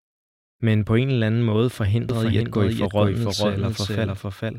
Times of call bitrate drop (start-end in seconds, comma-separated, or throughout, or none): none